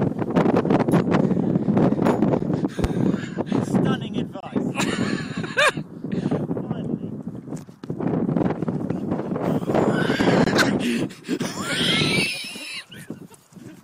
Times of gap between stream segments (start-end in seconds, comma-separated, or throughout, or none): 2.39, 4.40-4.43, 8.43, 10.44-10.47